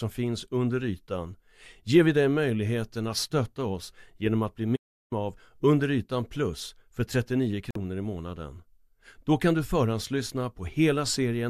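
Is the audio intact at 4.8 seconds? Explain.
No. An audio dropout to silence runs from 4.76 to 5.12 s, just after "oss genom att bli", swallowing about 0.35 s of speech. The signal feeding the recording was likely lost for that moment, through a disconnected device, a broken link or an accidental mute, while the recorder kept writing silence. The speech cuts off abruptly, leaves a gap of total silence with no room tone, then resumes mid-flow, and whatever was said there is gone.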